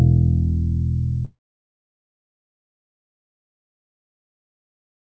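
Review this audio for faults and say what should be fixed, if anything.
No faults found and nothing to fix; the audio has no content above 8 kHz, consistent with a wideband call path such as a G.722 link.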